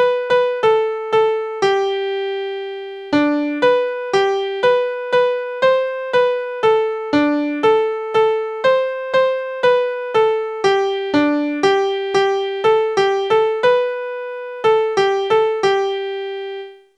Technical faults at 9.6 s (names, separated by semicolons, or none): none